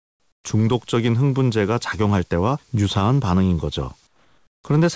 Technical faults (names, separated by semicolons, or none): comfort noise in place of the background